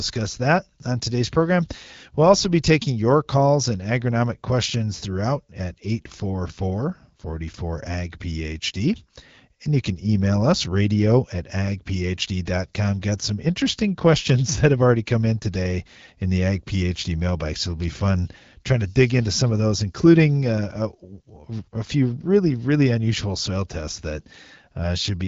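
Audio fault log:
No fault found in this speech clip.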